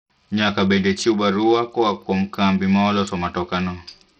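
Bluetooth SBC compression runs throughout the speech: treble flickers and drops out under gritty, aliased grain, likely from a starved bit pool consistent with about 64 kbps.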